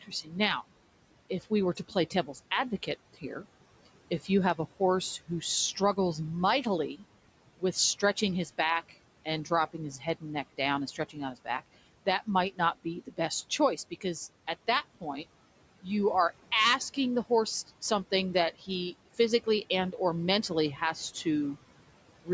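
From the start and through all 22 seconds, noise suppressor artifacts are present. The suppressor pulls the steady room noise, which sits about 19 dB below the speech, down by about 18 dB in the gaps. The noise then swells back up under each phrase. On a spectrogram the background between phrases looks patchy and speckled instead of an even wash. The waveform's noise floor pumps up and down, and the spectrum stops cleanly at 8 kHz from the call microphone processing.

The suppressor also causes speech cut by the noise suppressor, where it mistakes parts of the speech for noise. This happens at 0.01–0.29 s (a dip of up to about 12 dB over roughly 150 ms), 1.41–5.97 s (up to about 14 dB, roughly half a second in total), 7.58–15.26 s (up to about 17 dB, around a second in total), 16.94–19.93 s (up to about 14 dB, roughly 200 ms) and 20.49–21.26 s (up to about 8 dB, roughly 100 ms). The affected parts of the speech sound swallowed or faint. 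On a spectrogram they show as faded high-frequency fricative energy and truncated decays, and in the waveform as envelopes that collapse abruptly.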